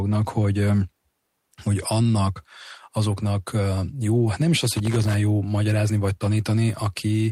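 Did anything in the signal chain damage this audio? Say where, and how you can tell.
Yes, in the analogue wiring: loose connector crackle from 4.65 to 5.14 s, between "jó hát nem is" and "jó magyarázni vagy". For about half a second the speech breaks into irregular scratching as a worn contact intermittently opens, chopping the signal.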